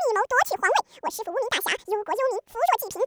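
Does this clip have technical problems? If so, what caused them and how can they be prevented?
Yes. The speech has audio read two samples at a time throughout. Sample pairs were taken as single frames, so it plays at double speed, an octave higher. Match the reader's channel count and sample width to the file's actual format.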